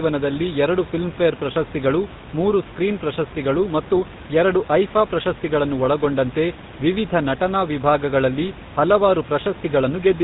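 From start to end the speech carries GSM full-rate codec damage, which fits a 13 kbps stream: the excitation is rebuilt from sparse regular pulses, giving a buzzy, gravelly roughness. A spectrogram shows a hard ceiling at 4 kHz. Room noise sits about 18 dB below the speech.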